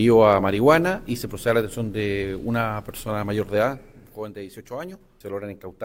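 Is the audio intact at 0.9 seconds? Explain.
Yes, the audio is intact at 0.9 seconds.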